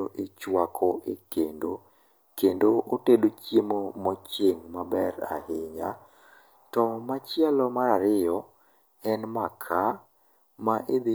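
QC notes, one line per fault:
Nothing stood out on listening to the speech in any part of the recording.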